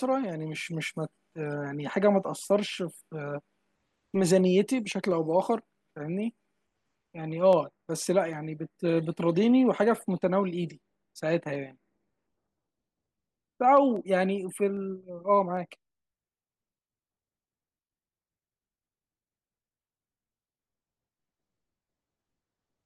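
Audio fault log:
0.29–22.81 s, clock drift buffer slips: a click recurs every 0.81 s, around 30 times, while speech is present. Its strict regularity sets it apart from random dropouts. Each tick fits about 7 samples slipped, likely from clocks disagreeing by roughly 200 ppm.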